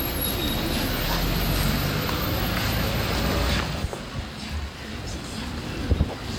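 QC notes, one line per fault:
Nothing to flag here, the sound holds up fine all the way through with nothing that catches the ear.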